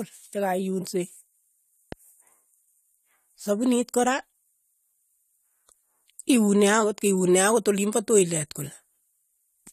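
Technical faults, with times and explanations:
1.92 to 1.95 s, loud pop: a single sharp pop rises a few decibels above the speech, which carries on beneath it. A sudden voltage pulse, likely from a plug, switch or static discharge, was added to the signal.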